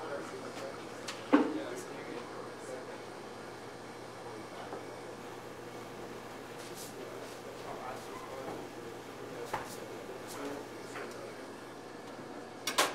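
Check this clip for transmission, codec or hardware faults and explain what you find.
There's one fault: periodic clock jitter from 5.19 to 10.74 s. Something is shaking the converter clock at around 1 kHz, spraying sidebands around everything and giving a rough, metallic edge that stops when things go quiet.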